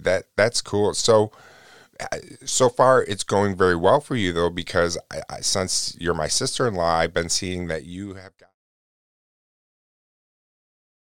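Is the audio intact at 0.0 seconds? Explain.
Yes, the speech at 0.0 seconds is intact, with no fault at that moment.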